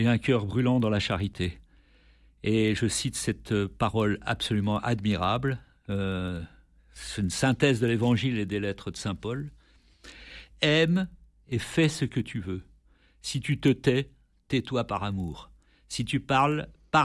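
The resampler restarted on every block throughout, converting 48 kHz to 24 kHz in isolated 40 ms chunks, so each block edge lacks its true neighbouring samples. That leaves a small error every block, heard as a 25 Hz buzz riding under the speech whenever signal is present.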